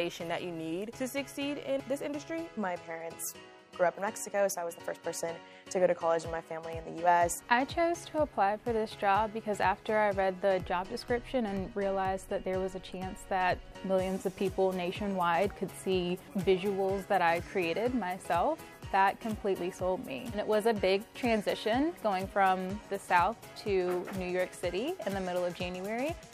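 No technical faults can be heard anywhere in the recording; the signal holds steady and intact throughout.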